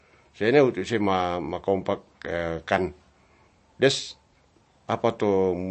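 MP3 compression runs throughout the speech, likely at a low bitrate near 36 kbps. Nothing sounds above 8.3 kHz, where the encoder cut the treble, and weak frequency lines flicker between frames, giving a plainly audible watery, swirly texture.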